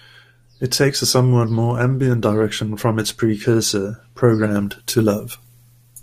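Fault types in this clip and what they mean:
Pre-emphasis left on: From 4.51 s to the end at 6.02 s, the speech turns thin, bright and hissy because a treble boost applied before recording or transmission never received its matching cut. The lift reaches about 10 dB at 10 kHz relative to 1 kHz and climbs steadily from around 3 kHz, which fits the 50 µs FM curve. A high-pass filter would only remove low end, leaving the treble level unchanged.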